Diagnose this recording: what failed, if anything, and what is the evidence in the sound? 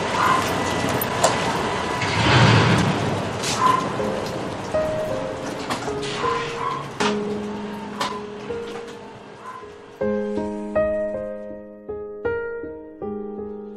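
Nothing failed here: no stage of the chain, from the analogue wiring and converter through the driver, processing and transmission to storage and playback, leaves any mark on this recording. There is no event anywhere in the sound that points to a fault, so there is nothing to diagnose.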